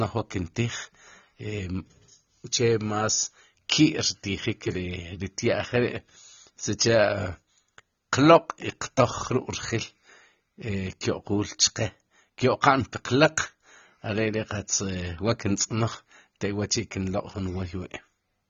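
From start to finish the speech is band-limited, with nothing above 6.9 kHz, and sounds dull and smeared, with a fizzy, warbling edge on sibilants. This is likely AAC compression, AAC-LC at a low bitrate near 24 kbps, lowering its cut-off and coarsely quantising the remaining spectrum.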